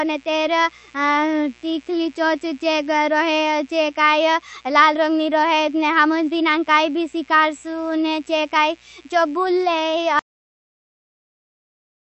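Mains buzz runs throughout: switching spikes at twice the 60 Hz mains rate leak into the recording, giving a steady, raspy buzz roughly 35 dB below the speech.

The whole clip is also watery and swirly, with nothing above 8.1 kHz, likely from MP3 compression at a low bitrate near 40 kbps, starving weak frequency lines.

A cut-off end comes at 10.19 s, where the final buffers were never written, so the speech stops mid-sound and drops straight into digital silence.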